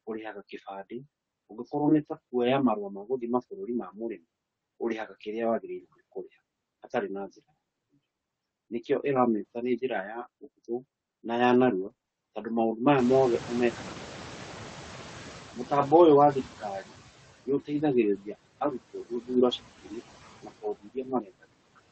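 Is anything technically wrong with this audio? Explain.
Yes. There are four faults, three of them local and one running through the whole speech recording.

Noise suppressor artifacts are present throughout. The suppressor pulls down the frequency bands it judges to be steady noise, frame by frame, by about 14 dB here. As a result the background dips between phrases and comes back up under the speech.

Repeated packet loss (robotic sound) runs from 11.81 to 12.17 s, starting right after "ũhũthũ na ya". The pattern fits a run of half a dozen lost packets, each gap no longer than 20 ms, with about a third of the span filled in by concealment. The decoder stretches the last good sound into each hole, and the next hole arrives before playback recovers. That gives a choppy stretch with fragments missing.

Noise suppressor catching up spans 12.97 to 17.04 s. Around 13 s the room noise jumps by about 24 dB. 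That room noise belongs to the recording itself and ends up about 18 dB below the speech. The suppressor's noise estimate trails the jump, so the louder background leaks through at first and then settles over roughly 4.1 s to a reduction of about 11 dB.

Speech cut by the noise suppressor occurs between 20.82 and 21.08 s. The suppressor mistakes part of the speech for noise and drops it by as much as about 14 dB, across something like 150 ms in total. Part of the speech in that stretch comes out swallowed and faint.

The call path audible underneath is Opus. Its audio band tops out near 8 kHz, which fits a wideband setting in the region of 24 kbps.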